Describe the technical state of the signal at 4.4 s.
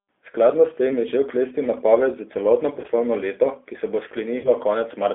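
At 4.4 s the signal is inside a stretch of VoIP packet loss concealed by the speech codec, running from 4.38 to 4.49 s, just after "leto ki se bo". About 60 ms of coded audio never arrived, which fits two lost packets, so the decoder kept extrapolating from its last pitch and filter state while pulling the gain down frame by frame. The sound smears into a fading buzzy tone or coloured noise, and because each frame builds on the one before, it stays weak and distorted for a short while after data resumes.

Underneath, the whole clip has passed through the G.729 codec, here the G.729A form at 8 kbit/s. It rebuilds speech from a vocal tract filter, a pitch predictor and a few coded pulses per frame. The line band is limited to about 250 Hz to 3.5 kHz, so the speech sounds thin and muffled, and the coding damage is plainly audible as a rough, slightly synthetic texture.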